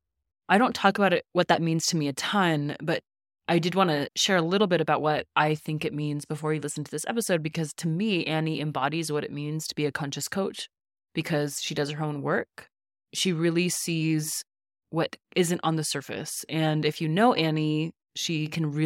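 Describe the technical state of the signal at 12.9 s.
At 12.9 s the speech signal is intact, with no fault present at that moment.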